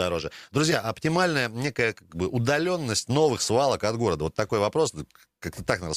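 No audible faults anywhere in the recording; the signal holds steady with nothing that calls for attention.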